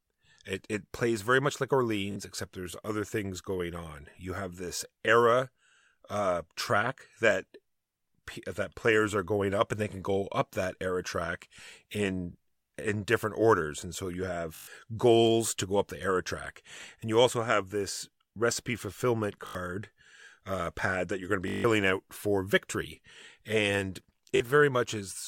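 Bluetooth stutter occurs five times, at 2.12, 14.55, 19.47, 21.48 and 24.36 s. Packets arrived late or not at all, so the receiver replayed its last buffer. Each gap is a rapid buzz of repeated slices of roughly 20 ms, lasting 41, 122, 81, 163 and 41 ms. The first follows "plays very much like", the second "orders and so you", the third "have this recipe fulfillment". Speech then resumes as though it had played on.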